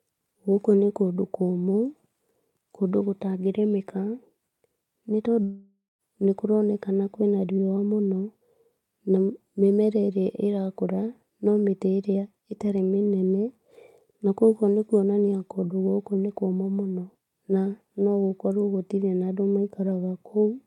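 From 5.43 to 6.02 s the speech smears into a fading buzz, falls silent, then resumes at "nĩ kũroneka kũrĩ na", likely a long network dropout.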